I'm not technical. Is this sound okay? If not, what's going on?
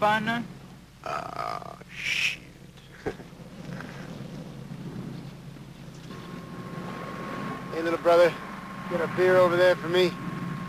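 No. From 2.03 to 4.66 seconds there is an overlap-add ripple: the audio was chopped into short overlapping pieces and rejoined unevenly, so loudness pulses around three hundred times a second. That speed gives a buzzy, robotic roughness, not the slower wobble of ordinary tremolo.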